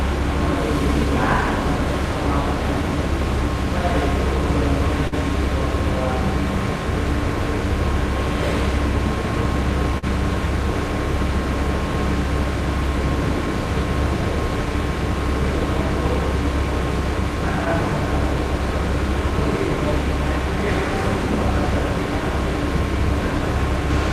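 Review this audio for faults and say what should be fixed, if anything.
Two short stalls from a late packet, at 5.07–5.14 s and 9.98–10.05 s. The jitter buffer ran dry, so the last bit of sound was held for 47 ms, then 45 ms, before resuming in place; nothing's lost. A deeper jitter buffer would fix it.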